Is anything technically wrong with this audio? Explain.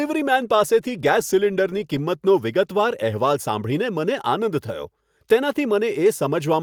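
No, there are no technical faults.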